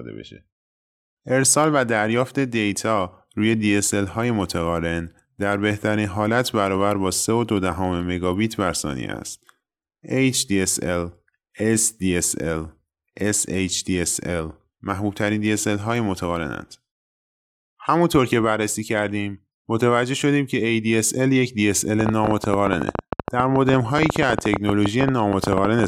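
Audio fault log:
22.01–25.85 s: train of clicks. A run of sharp, similar pulses ticks over the speech, about 50 in all. They arrive at roughly 11.7 per second, but the spacing is irregular, so the ticking stutters rather than keeping a steady beat. They stand well above the speech, around 20 dB louder at their peaks, and carry on through pauses. The likely cause is interference from nearby equipment or a faulty connection or power supply.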